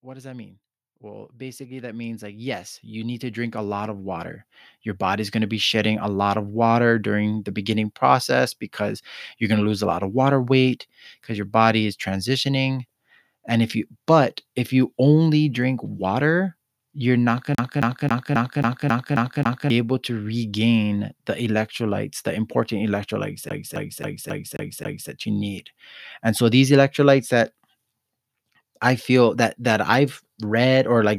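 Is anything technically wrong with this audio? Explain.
Yes, there are two kinds of fault in this speech. From 0.05 to 4.35 s, the automatic gain is rising: the gain control judged the input too quiet and raised its level by about 16 dB, so the voice and background swell together gradually.

The clip also has a CD stuck on one turn, twice. A disc defect keeps throwing playback back by the same 0.27 s, so that fragment repeats with brief mutes at each jump. From 17.55 to 19.70 s, after "water you're not going" and before "able to regain the", it stutters eight times. From 23.49 to 25.10 s, after "electrolytes the important electrolytes" and before "you need", it stutters six times.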